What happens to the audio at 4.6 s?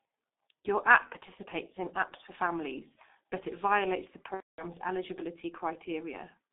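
At 4.6 s the audio is at the tail of a dropout concealed by the speech codec. It runs from about 4.34 to 4.64 s, right after "but it violates the". About 240 ms of packets went missing, which fits eight lost 30 ms frames. The decoder fills the gap by repeating its last pitch and spectral shape while lowering the level. That smears the sound into a fading tone or noise, which G.723.1 mutes from the third lost frame on. The voice stays weak or distorted for a while after the packets return.

Underneath, the whole clip passes through a G.723.1 codec at 6.3 kbit/s. The line band sits between 250 Hz and 3.6 kHz, so highs and deep lows are gone. The codec damage is heavy. Long frames and a slowly updating voice model make the sound muffled and hoarse. Consonants are blurred. That coarse model also shapes the concealed stretch.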